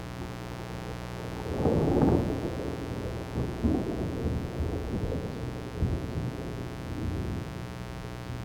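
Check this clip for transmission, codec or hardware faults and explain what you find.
A mains buzz runs through the whole clip, sitting only about 10 dB below the wanted sound. It comes from 60 Hz power leaking in as sharp switching spikes, such as from a dimmer, rectifier or poor shielding, twice per cycle. It is heard as a constant, raspy, edgy drone. A spectrogram shows a dense comb of steady horizontal lines at multiples of 60 Hz reaching into several kHz, and a zoomed waveform shows regular spikes about 8.3 ms apart.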